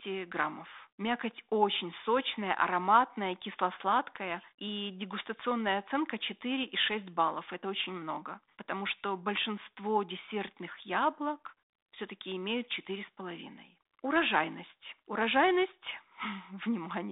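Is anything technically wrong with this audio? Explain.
No, nothing stood out on listening to this speech clip.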